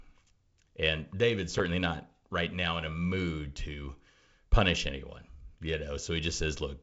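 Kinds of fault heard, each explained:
Block of digital silence: at 1.59 s the speech drops to silence for about 7 ms, a block of samples left unfilled, most likely because the output buffer was not written in time. The cut and return are abrupt, without any fade, and at this length the gap is heard as a tick or dip rather than as silence.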